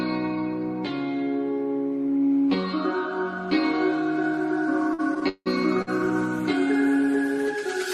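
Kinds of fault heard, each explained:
Repeated stalls (stutter): from 4.93 to 5.89 s the sound halts and resumes five times as incoming packets fall behind playback and the jitter buffer keeps draining. At each halt the receiver stretches the last bit of sound to cover the wait, about 295 ms in all, with the longest hold at 168 ms, so roughly a third of that stretch is filler. Nothing is lost, but the passage drags and stutters.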